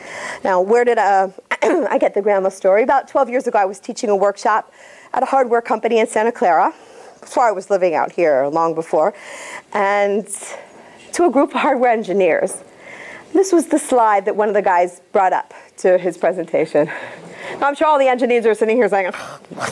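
No technical faults are audible.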